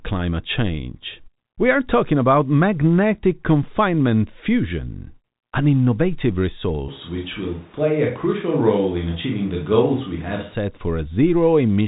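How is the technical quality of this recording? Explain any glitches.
One glitch stands out, heard through G.711 telephone coding that passes nothing above 3.8 kHz. A switch to a distant microphone, 6.89 to 10.55 s, likely replaced the close pickup: speech turns abruptly roomy and thin, with room noise roughly 30 dB down.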